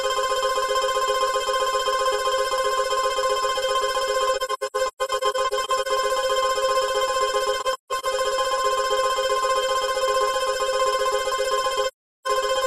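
Soft-edged dropouts break up the sound three times: a scattered cluster between 4.36 and 5.87 s with about 640 ms missing in total, runs reaching roughly 150 ms; a shorter cluster from 7.60 to 8.05 s; and a single gap from 11.87 to 12.27 s. Each hole fades out and back in. This is AAC frame loss with muting. The decoder zeroed the spectrum of missing frames, and overlapping windows smoothed each gap's edges.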